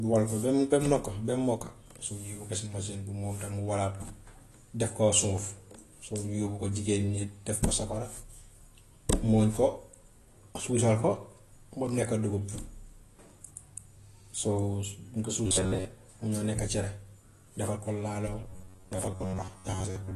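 Speech with a dull, smeared character throughout, nothing above about 12 kHz and plainly audible warbling on sustained sounds; this is likely AAC compression (AAC-LC), the lowered cut-off and spectral holes fitting a low bitrate of around 32 kbps. From 15.47 to 15.85 s, and again from 18.42 s to the end at 20.15 s, the sound turns into a rigid metallic buzz at 93.8 Hz: robotic sound from repeated short buffers, likely from a roughly 10.7 ms stretch being replayed in place of most of the real audio.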